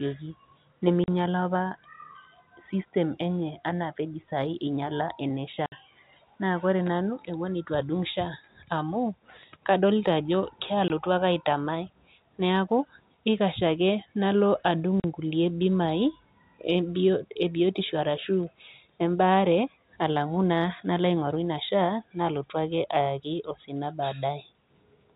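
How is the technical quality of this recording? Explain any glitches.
The speech has four brief dropouts caused by packet loss filled with silence. They fall at 1.04 to 1.08 s, at 5.66 to 5.72 s just after "inyala ene", at 10.88 to 10.90 s, and at 15.00 to 15.04 s just after "nalo adung'". The gaps last 40, 60, 20 and 40 ms, which fits 20 ms packets. The receiver played silence for each missing packet. Each hole cuts off hard at its edges. The G.711 telephone band limit above 4 kHz can also be heard.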